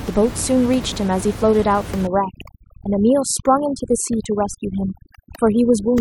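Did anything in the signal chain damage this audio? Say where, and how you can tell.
Yes. Overdone noise removal from 2.07 s to the end, in call processing. An over-aggressive suppressor drops bands near its noise estimate, so room noise about 12 dB below the speech collapses into near silence with twinkling specks.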